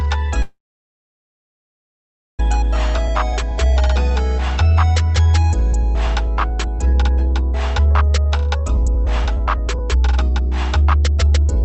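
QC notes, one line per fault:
0.42–2.40 s, call audio freeze: the sound stops and a brief fading tail gives way to about 1.83 s of silence. It then resumes exactly where it left off, with nothing lost. The likely cause is delayed packets draining the jitter buffer, which inserts a gap of about 2 s.
2.98–11.65 s, jitter buffer speed-up: the audio plays about 14% fast at unchanged pitch and sounds hurried. The receiver trims many short pitch-period slices to work off the backlog from the freeze, removing roughly a second and a half in total. This is heard over the Opus call path's band limit of 8 kHz.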